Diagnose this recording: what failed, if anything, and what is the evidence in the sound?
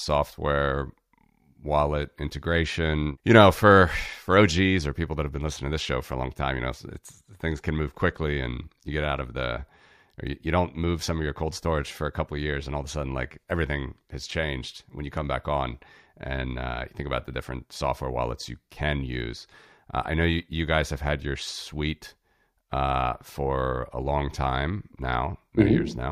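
No failure can be heard at any stage of the chain, and the speech signal arrives intact with nothing in it that calls for a diagnosis.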